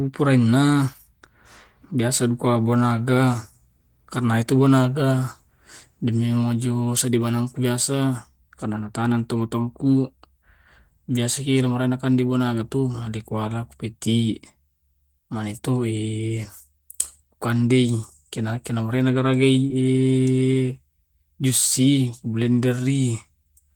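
A speech recording with one short concealed packet loss at 19.67 to 19.72 s: about 20 ms of audio didn't arrive in time, so the decoder stretched the preceding sound over roughly 23 ms and blended back, leaving a quick smear there.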